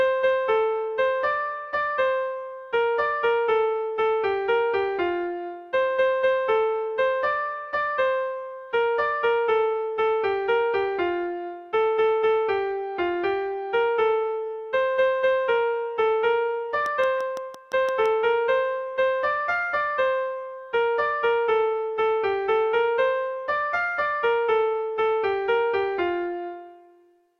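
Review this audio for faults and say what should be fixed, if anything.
There's a train of clicks from 16.86 to 18.07 s: about seven evenly spaced ticks at 5.9 per second, poking a few dB above the sound, likely interference or a faulty connection or power supply. Check cabling, grounding and nearby gear, and keep the interface's buffer and drivers stable.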